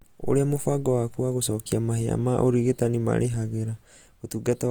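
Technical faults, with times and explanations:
Throughout, Opus compression: the speech sounds plainly rough and grainy, with tonal parts turned noisy, while content still extends to about 20.4 kHz. This is likely Opus in music mode at a rate fitting about 24 kbps, filling starved bands with folded spectrum or noise.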